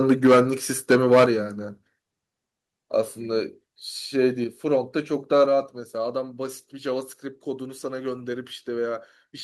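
From 0.09 to 0.41 s the speech breaks into a harsh, crackling edge. This is microphone overload. The peaks run about 9 dB past the converter's limit, and roughly a tenth of the waveform has its tops sheared flat. The likely cause is an input volume set too high. At 0.27 s, still inside that burst, the level drops about 3 dB in one step. This is the microphone volume stepped down. Voice and background fall together. The call software has likely cut the device's input gain after detecting the clipping.

The overload returns from 0.9 to 1.25 s, about 8 dB over, again with roughly a tenth of samples flattened. At 1.26 s a larger step follows, about 6 dB down. At 4.44 s the level drops another 4 dB or so, with no distorted peak just before it. From 5.41 to 5.44 s a brief, milder clip appears, about 1 dB over, with only a small share of samples cut. At 5.46 s the gain steps down again, by about 4 dB.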